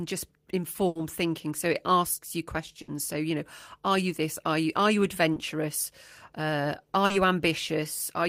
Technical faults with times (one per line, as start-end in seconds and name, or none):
0.87-0.98 burst of packet loss
2.82-2.90 burst of packet loss
5.34-5.38 short concealed packet loss
7.06-7.12 short concealed packet loss